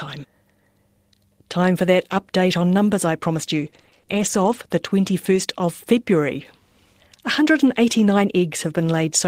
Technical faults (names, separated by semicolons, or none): lost packet rebuilt from error correction; repeated packet loss (robotic sound)